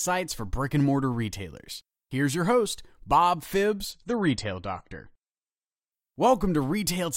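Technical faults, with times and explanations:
3.92 to 5.92 s, adaptive stream at a lower bitrate: the speech suddenly turns duller, with nothing left above 9 kHz, and codec artefacts rise. There is no gap, and it snaps back to full clarity at 5.92 s. The stream switched to a lower-quality version for those two seconds, most likely because the connection slowed. The sound fits AAC dropping from about 96 to about 32 kbit/s, where the encoder discards treble and codes the rest coarsely.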